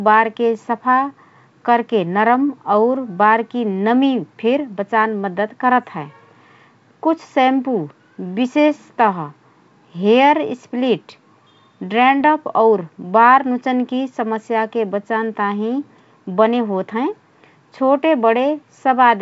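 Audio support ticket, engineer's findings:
Brief pop and rough burst with a momentary level jump at 5.83 s, right after "फिर बचान मद्दत". Bit errors on an ADPCM link, low rate around 0.2%, likely corrupting the G.722 decoder's step size and predictor so the damage rings on for milliseconds.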